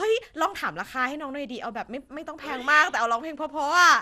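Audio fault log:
Throughout, generation loss: the speech sounds swirly, smeared and hollow, with consonant attacks blurred and no content above 16 kHz. The likely cause is repeated lossy coding, consistent with MP2 at around 96 kbit/s applied roughly ten times over. Each decode and re-encode quantises the signal again on a shifted frame grid, so the noise from every pass stacks up. That leaves more degradation than a single pass at that rate would produce.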